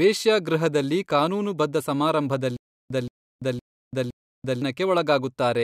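Playback likely stalled from 2.57 to 4.62 s, replaying its last fragment at each retry before running dry. The result is stutter with silent gaps: a 176 ms burst of the speech repeats four times, every 513 ms, separated by 337 ms of dead digital silence.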